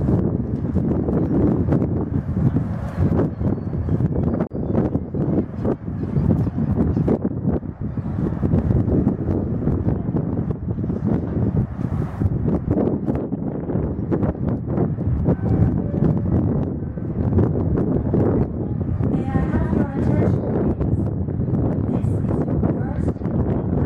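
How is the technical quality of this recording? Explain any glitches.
The recording has one glitch: a gap at a join of encoded pieces. At 4.47 s the sound drops out for about 36 ms, ending at 4.51 s. The audio was most likely encoded in separate pieces and spliced without trimming. Each encode leaves silent padding at its edges, and that padding stayed in at the seam. You hear a brief hole with smeared edges. Then the sound resumes exactly where it stopped.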